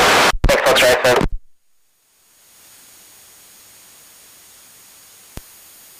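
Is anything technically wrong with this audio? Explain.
Yes. At 0.30 s there is a brief glitch lasting only a few milliseconds that breaks the continuity of the sound. This is damaged data in a compressed stream: some bytes in that stretch of the encoded file were lost, zeroed or overwritten, so the decoder misread the affected frame, lost its place and had to search for the next valid frame header before playback could continue cleanly.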